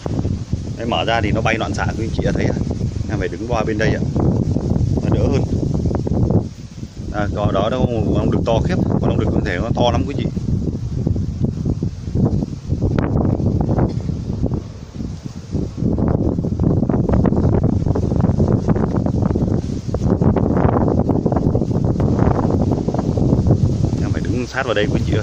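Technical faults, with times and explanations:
22.0 s to the end: doubled audio track. A second full-band copy kicks in abruptly, trailing by about a second and a half at roughly the same level, with no decay or room colour. Likely a slower second capture path or an edit leaving two copies overlapping.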